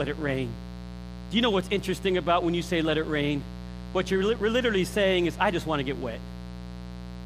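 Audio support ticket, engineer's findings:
Mains buzz, present throughout. Steady, raspy 60 Hz buzz with harmonics reaching into the kHz range, sitting only around 10 dB below the speech. Sharp switching spikes twice per mains cycle. Probable source: dimmer, rectifier or unshielded cable coupling into the chain.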